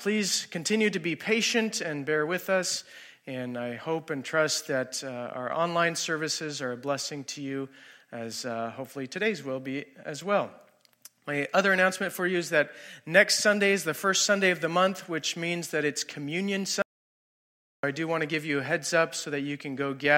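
At 16.82 s an audio dropout to silence cuts the sound for about 1.01 s until 17.83 s, likely a lost input; the waveform goes flat and the spectrogram shows a blank band.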